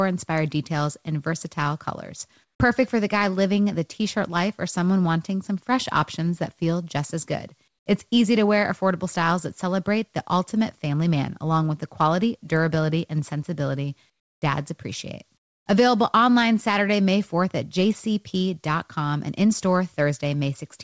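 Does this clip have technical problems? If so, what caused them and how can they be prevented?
Yes. There is comfort noise in place of the background in four short pauses: 2.44 to 2.60 s, 7.68 to 7.86 s, 14.10 to 14.42 s, and 15.38 to 15.66 s. The real background, already about 48 to 57 dB below the loudest speech, turns into a flat, featureless hiss. Its level jumps about 13 dB up in the first gap. It drops by about 11 to 20 dB in the others. The likely cause is discontinuous transmission: the sender's voice detector halts audio, and the receiver synthesizes noise to fill the silence. Disabling discontinuous transmission on the call, so the real background is always sent, prevents it.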